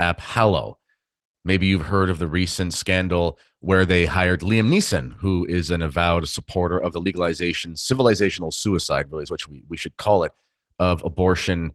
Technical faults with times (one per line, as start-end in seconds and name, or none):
0.00-11.75 Opus voice compression